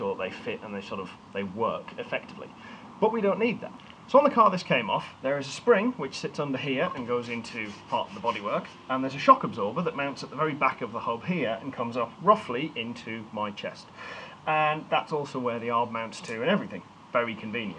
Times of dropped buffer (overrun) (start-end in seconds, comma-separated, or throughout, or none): none